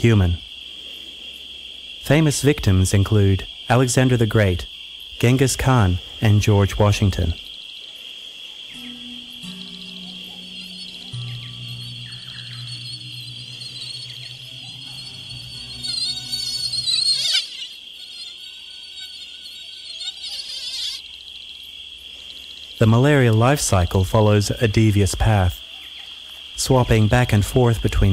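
No technical faults can be heard anywhere in the recording. Nothing in it breaks up, drops out or stops short.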